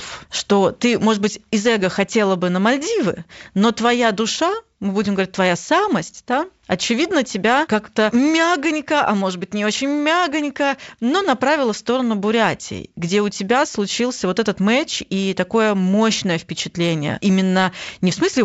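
The speech comes across as wideband telephone audio, reaching up to around 7 kHz in the way G.722 coding does, which fits the full 64 kbit/s mode, and no technical fault can be heard anywhere in the clip.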